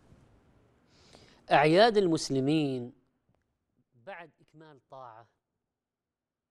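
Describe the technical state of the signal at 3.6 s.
Zipper noise runs from 2.46 to 3.83 s, so it is active at 3.6 s. The level is falling by roughly 25 dB in unsmoothed 2 dB steps, around ten per second, and each jump leaves a small click, giving a ticking zip over the fade.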